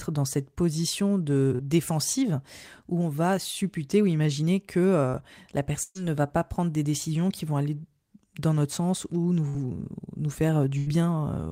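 At 1.55 to 1.61 s, between "dans cette position" and "défensive où on va", there is a short concealed packet loss. About 40 ms of the speech never arrived in time. The receiver covered the hole by extending the preceding sound for about 35 ms, then blended back. It is heard as a brief smear in the flow.

Three bursts of packet loss follow. At 5.83 to 5.97 s, just before "ne va pas prendre", about 120 ms is gone. The last sound is stretched and fades over that span, ending in about 30 ms of silence before the speech resumes. At 9.49 to 9.56 s, after "dans notre sens ou", about 40 ms is lost and patched over 50 ms. At 10.78 to 10.88 s, about 80 ms is lost and bridged over 85 ms. In each burst, the lost audio is replaced by a held, decaying continuation, and the speech picks up later with that part missing.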